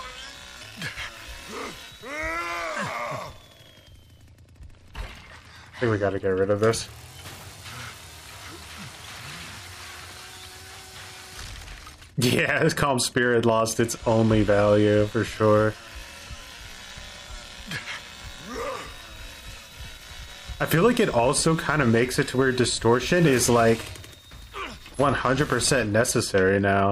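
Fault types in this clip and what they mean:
Nothing here to flag: no faults turn up anywhere in the audio.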